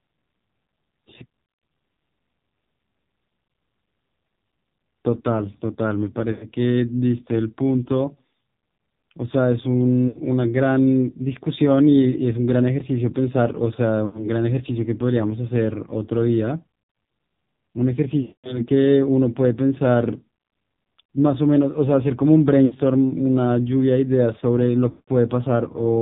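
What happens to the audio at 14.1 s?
Right around 14.06 to 14.29 s you get lost AMR speech frames. About 80 ms of audio went missing, which fits a run of four 20 ms frames failing their checks. The decoder covers the gap by repeating the last good pitch and vocal-tract settings while turning the gain down, so the voice smears out into a drawn tail and sinks toward silence. When real frames resume, the speech comes back thin and a bit rough for a moment.

That dropout sits on top of the AMR narrowband mobile codec running through the whole clip, and here the damage is heavy. Everything above 4 kHz is gone, and the pulse-driven vocal-tract model is squeezed hard, which points to a low rate around 6 kbps. The speech at 14.1 s already sounds buzzy and synthetic before the frames drop.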